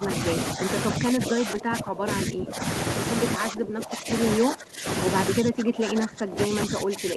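The speech repeatedly dips, sinking by up to around 20 dB at 0.0–0.1 s, 0.54–0.69 s, 0.97–2.63 s, 3.36–4.1 s, 4.39–4.86 s and from 5.39 s to the end. This is speech suppressed in double talk, likely from an echo canceller attenuating the talker while the far end also spoke.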